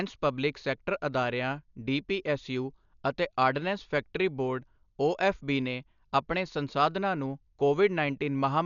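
Dolby Digital compression, heavy, runs throughout the speech: nothing survives above 7 kHz, so the voice sounds dull, with rough, fluttering noise around tonal parts. This likely comes from an AC-3 encoder starving many frequency lines of mantissa bits, which fits a bitrate near 48 kbps.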